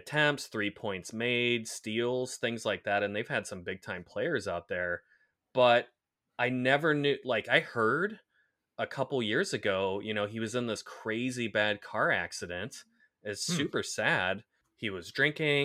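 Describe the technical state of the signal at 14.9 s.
At 14.9 s the signal is intact, with no audible dropout, distortion or other fault at that moment.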